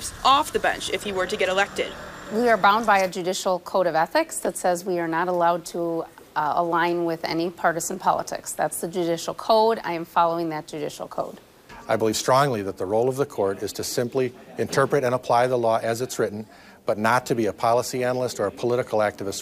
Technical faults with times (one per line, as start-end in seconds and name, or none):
none